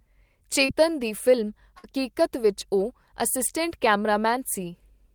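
A speech clip with two network glitches. Around 0.65 to 0.70 s there's a short concealed packet loss: about 40 ms went missing, and the receiver papered over it by stretching the preceding sound, so you hear a quick smear. Then at 1.78 to 1.86 s comes a burst of packet loss, roughly 60 ms gone, where the continued sound fades out before the audio picks up again further along.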